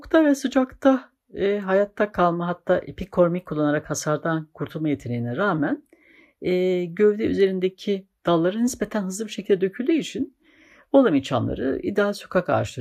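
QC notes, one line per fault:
No technical faults are audible anywhere in the signal.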